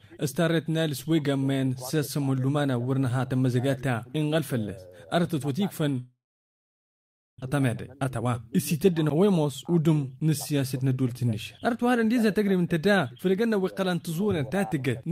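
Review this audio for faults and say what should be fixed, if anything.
Long network dropout, 5.99 to 7.44 s. The audio stops and the last sound is briefly stretched into a fading buzz, then about 1.2 s of silence follows before the sound resumes partway on. About a second of the original audio is simply gone. This is likely a network outage in which no packets arrived, and the receiver filled the gap with concealment until it gave up. The stall also left roughly 0.4 s of extra delay queued behind it. To prevent it, improve the link's reliability or add redundancy, such as forward error correction or a backup path, so a single outage doesn't erase a full second.

Jitter buffer speed-up, 7.46 to 9.62 s. Right after the dropout the sound runs at about 118% speed with unchanged pitch, so it comes across as hurried. The delayed packets arrived in a burst and overfilled the jitter buffer. To drain it back to its target depth, the receiver repeatedly cut out tiny pitch-period-length slices, removing around 0.4 s in total over those two seconds. 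To prevent it, let the buffer shrink more gradually after a burst, spreading the time compression over a longer span so the acceleration stays inaudible.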